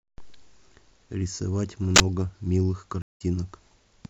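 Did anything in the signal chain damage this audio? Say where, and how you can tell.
Yes. A loud 40 ms burst of digital noise at 1.96 s is an uninitialised buffer: the driver played it before audio was written, exposing leftover memory.

Speech cuts to silence for 179 ms at 3.02 s, then resumes about a tenth of a second later: a network stream reconnect, restarting the decoder mid-stream.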